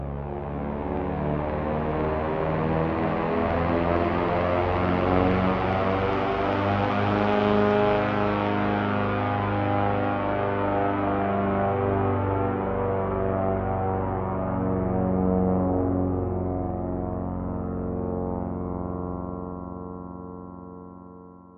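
No technical faults can be heard anywhere in this recording of sounds. There is nothing in it that calls for a technical explanation.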